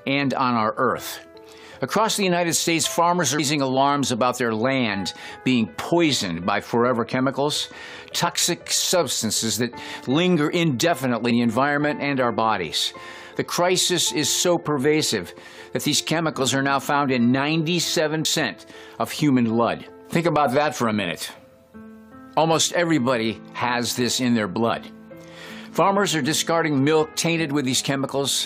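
Brief glitches break into the sound at 3.38 s, from 8.26 to 8.28 s, at 11.30 s and at 18.24 s. This is damaged data in a compressed stream: corrupted bytes make the decoder misread frames and lose sync until it finds the next valid header.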